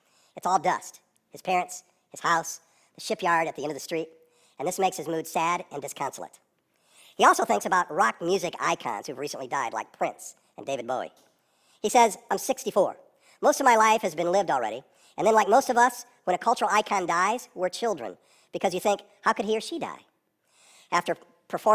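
Throughout, the speech plays at the wrong sample rate. It runs 1.45 times too fast. Pitch rises by 6.45 semitones with it. The speech sounds high and hurried. The ratio fits audio recorded at 22 kHz and played at 32 kHz without conversion.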